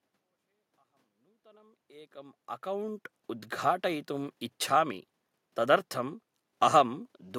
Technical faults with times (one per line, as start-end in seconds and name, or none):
none